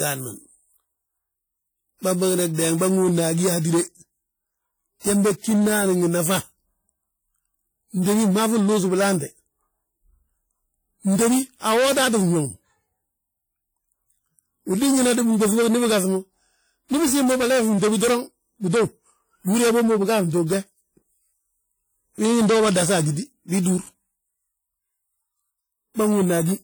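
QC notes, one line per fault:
Throughout: WMA compression. Likely cause: a transform codec at a low bitrate, which fits WMA 1 at about 48 kbps. Quantisation noise spreads across long blocks and weak components are discarded, so the speech sounds ringing and washy, with hiss that breathes with it. The damage is plainly audible.
2.53, 3.59, 17.97, 23.02 and 23.11 s: pre-echo. A sharp onset falls late in a coding block, so noise sized for the loud part also fills the quiet gap before it. Each attack is preceded by a short hiss lasting 35 to 55 ms and sounds smeared.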